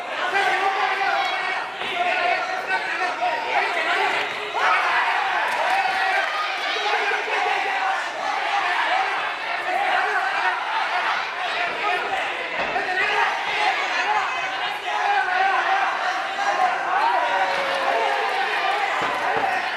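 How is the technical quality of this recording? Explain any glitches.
No technical faults are audible.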